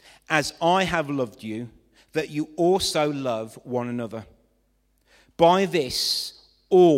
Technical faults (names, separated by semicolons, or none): none